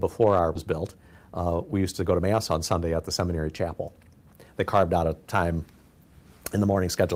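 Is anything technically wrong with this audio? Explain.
Yes. There are two timing faults near the start.

At 0.55 to 0.57 s there is a skip ahead. About a second of audio never plays. Either it was lost in transit, or the jitter buffer overflowed and discarded it while later audio was already queued. Playback jumps straight to that later material. Nothing fills the gap. The two sides are butted together, so the sound lurches forward abruptly.

From 0.65 to 2.59 s there is a jitter buffer speed-up. The buffer was holding more audio than its target. To shrink that backlog, the receiver cut out many short slices of one or a few pitch periods, one after another. Around a fifth of a second was removed. The audio runs at about 111% of normal speed with its pitch unchanged. The passage sounds noticeably hurried.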